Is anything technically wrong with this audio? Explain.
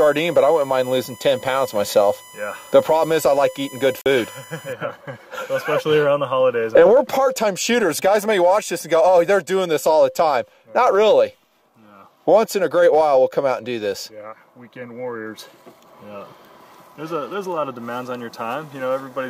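Yes, there are two faults.

From 0.00 to 4.73 s there is USB whine: a steady tone fixed at 1 kHz, sitting roughly 25 dB below the sound. A USB device polls the bus in 1 ms frames, and the current drawn at that rate gets into the audio path through shared power or ground, so the whine holds one exact pitch regardless of the material. It stops at 4.73 s.

From 4.01 to 4.06 s the audio drops out for about 43.5 ms, then resumes further along rather than picking up where it left off. This is likely a Bluetooth dropout: audio packets failed to reach the headphones in time and were discarded, so the output went silent until valid data arrived. A gap of this length fits a small run of consecutive lost packets.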